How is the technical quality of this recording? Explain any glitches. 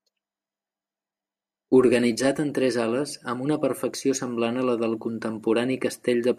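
No technical glitches are audible.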